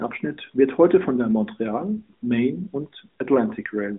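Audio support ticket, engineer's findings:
No faults found in this audio.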